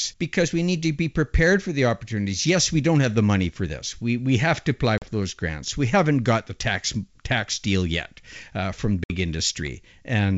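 Packet loss on an ADPCM call cuts hard-edged silent gaps into the speech at 4.98–5.07 s, between "we have to apply" and "those grants", and at 9.04–9.10 s, after "deal yet uh from". Each gap is a few lost packets, about 40 ms and 60 ms of audio, and the decoder's predictor must then resynchronise. On a waveform each gap is a flat line; on a spectrogram it is a blank vertical strip.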